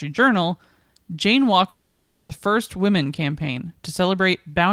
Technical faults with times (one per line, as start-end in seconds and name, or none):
1.69-2.32 long network dropout